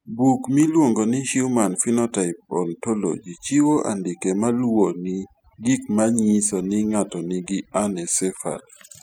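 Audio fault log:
Throughout, overdone noise removal: the denoiser is pushed too hard, gating bands near its noise estimate, so the background drops into near-silent, twinkly gaps.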